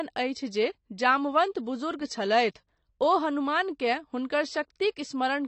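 Low-bitrate AAC compression is the likely cause of the damage that runs through the whole clip. The encoder appears to have had too few bits to code every frame fully, so it discarded the high band and quantised the rest coarsely, which fits AAC-LC at around 32 kbps. Nothing survives above 8.5 kHz, so the speech sounds dull and muffled. The sibilants and sustained vowels carry a plainly audible warbling, fizzy smear.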